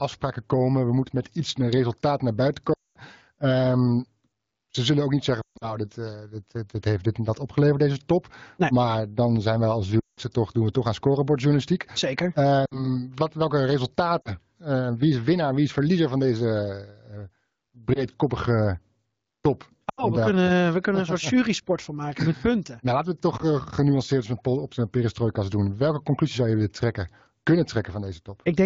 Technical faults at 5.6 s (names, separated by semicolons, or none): lost AMR speech frames